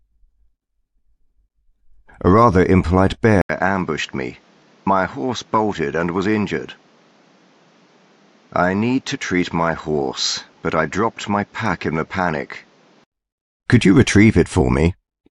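At 3.41 s the sound drops out for about 80 ms, then returns duller and roughly 5 dB quieter, with nothing above 7.6 kHz and a new background noise sitting well below the signal. The likely cause is an input switched to a poorer device, and at 13.12 s the sound clears again. A simple band-limit or codec change would narrow the top end alone. Here level, tone and noise floor all shift together, after a brief gap.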